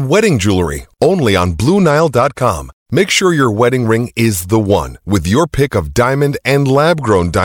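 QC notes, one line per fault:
1.43 to 2.43 s and 7.01 s to the end, Bluetooth SBC bit pool drop: right after "wedding jewelry only" the treble goes dull and a gritty, grainy noise rides on the speech for about a second, then clears; the same dulling and grit return for the last 0.4 s. The link starved the encoder, so the top sub-bands got few or no bits and the rest were coarsely quantised, which fits a bit pool cut from 31 to 14 (near 99 kbps). The sound never drops out or repeats as a packet-loss glitch would.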